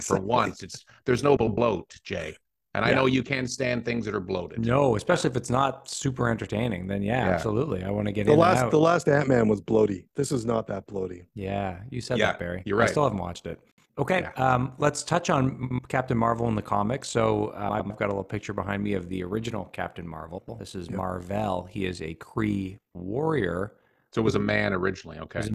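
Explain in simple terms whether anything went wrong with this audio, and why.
At 1.37, 15.63, 17.69 and 20.38 seconds, the speech briefly turns into a garbled flutter. These are frames out of order: two short chunks, each about a tenth of a second (a bit less at 15.63), played swapped, so the halves come back reversed. No sound is missing.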